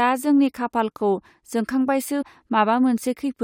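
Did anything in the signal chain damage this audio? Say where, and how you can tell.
Yes, there's damaged data in the compressed stream, so the codec or storage stage is to blame. From about 2.21 to 2.23 s the speech gets a quick glitch lasting roughly 20 ms. That happens when corrupted bytes reach the decoder: it can't make sense of those frames, loses sync, and hunts for the next valid frame header. The glitch comes from that recovery.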